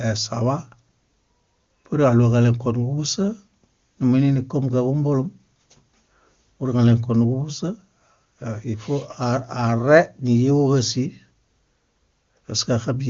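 No technical faults can be heard in this recording.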